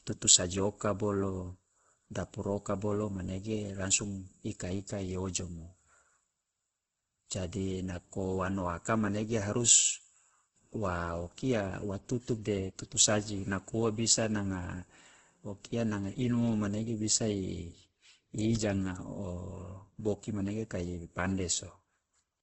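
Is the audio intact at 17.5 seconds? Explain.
No. Throughout the clip, including 17.5 s, likely Opus compression starved of bits, consistent with roughly 12 kbps in its music mode, fills bands coarsely. The speech sounds rough and grainy, with heavy damage and nothing above 8.3 kHz.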